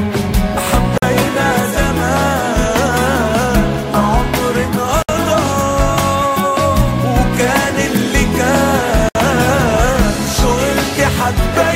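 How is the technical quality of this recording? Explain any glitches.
The recording has three short dropouts, all from the same fault: a gap at a join of encoded pieces. Silences open at 0.98 to 1.02 s (about 47 ms), 5.02 to 5.09 s (about 64 ms) and 9.09 to 9.15 s (about 64 ms), spaced roughly 4 s apart. The audio appears to have been encoded in separate pieces and joined untrimmed, so each seam keeps encoder start-up delay and end-of-piece padding. The sound cuts out abruptly, with smeared edges, then resumes where it left off.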